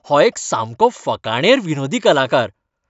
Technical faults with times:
none

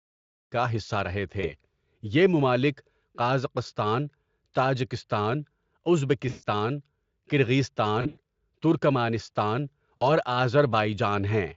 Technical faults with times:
1.41-1.54 VoIP packet loss concealed by the speech codec
6.29-6.44 VoIP packet loss concealed by the speech codec
8.01-8.19 VoIP packet loss concealed by the speech codec
9.97-10.03 VoIP packet loss concealed by the speech codec

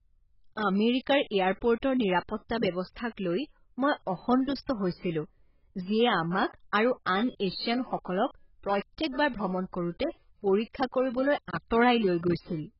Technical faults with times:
0.00-12.79 AAC compression

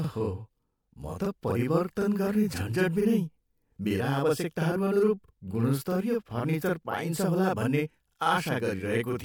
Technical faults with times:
0.00-9.24 channel delay (doubling)
8.47 corrupt frame decoded

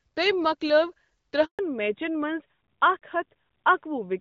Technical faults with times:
1.45-1.59 handover gap
1.59-4.21 fallback to narrowband

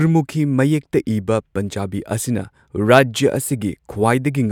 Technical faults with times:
none

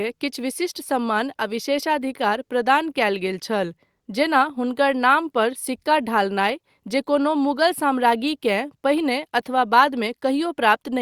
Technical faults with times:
none

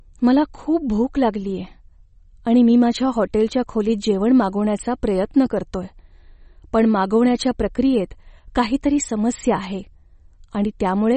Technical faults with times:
0.00-11.17 MP3 compression

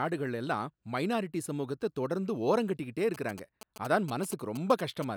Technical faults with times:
3.14-5.04 GSM signalling bursts

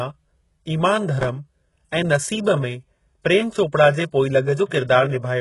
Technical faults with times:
0.00-5.40 HE-AAC compression
1.21-1.29 processor overload crackle

